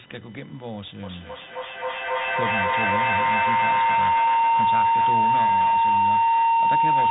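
Computer activity noise runs from the very start: a buzzy, chirping tone with a pulse rate of around 1 kHz, sitting roughly 20 dB below the speech. It rises and falls with the computer's workload rather than with anything in the speech. Load changes in the processor or graphics hardware disturb the ground that the audio circuit shares, and that disturbance lands directly in the signal path.

Tandem speech coding also affects the whole clip. The speech has a rough, noisy quality, and nothing is present above 3.9 kHz. This points to the call passing through more than one narrowband speech codec in sequence, and the sound fits a chain ending in G.726 at 32 kbit/s. Each stage decodes the audio and re-encodes it, so every coder inherits the previous one's damage and adds its own.

Feedback howl starts at 1.03 s and continues to the end. A tone near 1 kHz builds up as the loop repeats roughly every 300 ms, finally peaking about 12 dB above the speech. 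Two devices in the same room are on the call, so each loudspeaker feeds a microphone. The loop gains level on every pass, narrowing to the frequency it favours, and the howl never breaks.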